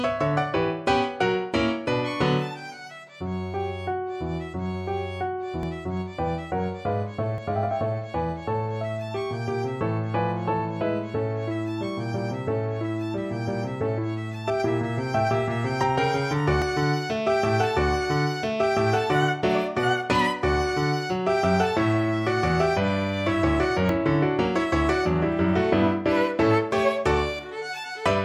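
The capture software likely failed to collect its samples before the hardware overwrote them, causing dropped buffers (overrun): at 5.63, 7.38, 16.62 and 23.89 s the audio jumps ahead with no gap, losing about 20 ms at the first and roughly 40 ms at each of the others.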